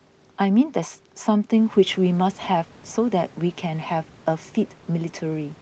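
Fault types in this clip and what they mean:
No fault can be heard in this speech: the audio stops at 8 kHz, consistent with call microphone processing, and the room noise rises by about 11 dB around a second and a half in but stays about 28 dB below the speech.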